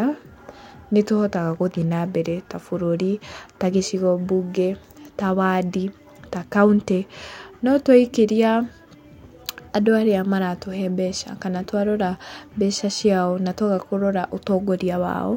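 No technical faults can be heard anywhere in this speech recording, so there is no event to place on the timeline.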